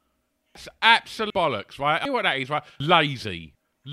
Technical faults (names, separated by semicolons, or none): audio missing between chunks